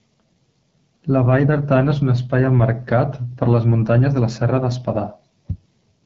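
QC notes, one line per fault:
Throughout: AMR wideband (HD Voice) codec, running at a low rate that fits about 8.85 kbit/s. Too few bits are left to code the speech excitation cleanly, so the speech turns plainly rough and raspy. There is no content above about 7.5 kHz, and the top band sounds like noise filled in to fit the shape.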